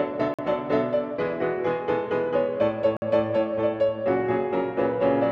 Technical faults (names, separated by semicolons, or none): Bluetooth stall